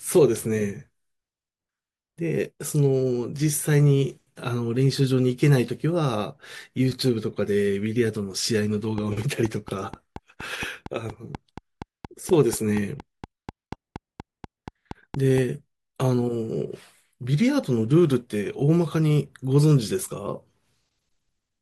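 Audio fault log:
8.98–15.39 s: train of clicks. A steady ticking runs over the speech at about 4.2 clicks per second, evenly spaced, roughly thirty in all. The pulses peak about 5 dB above the signal, and they are heard during pauses as well. The likely cause is interference from nearby equipment or a faulty connection or power supply. On a waveform they are regularly spaced, near-identical spikes; a spectrogram shows them as thin vertical broadband lines at equal intervals.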